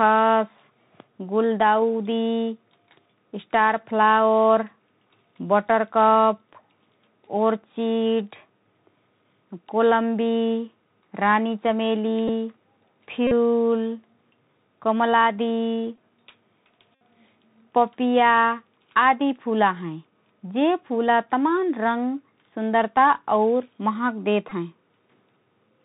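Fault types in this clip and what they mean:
Bluetooth CVSD headset codec: The whole clip runs through the narrowband headset codec, where each sample at 64 kHz is just an up-or-down bit and the step size adapts as it goes. Nothing above 4 kHz makes it through, so the speech sounds boxed in. The damage is plainly audible: loud high sounds outrun the step and distort, s sounds come out scratchy, and there's a grainy hiss under the speech.
Bluetooth headset packet repeated: There are five short glitches where the headset link dropped voice packets and the chip replayed the last one instead. The repeats cycle every 3.75 ms, which puts a buzz near 267 Hz on the gap. The two longer ones, about 41 ms at 13.27 s and about 64 ms at 16.95 s, buzz for longer. The others, at 12.28 s, 15.96 s and 24.5 s, last 11 to 19 ms and are shorter bursts of the same buzz.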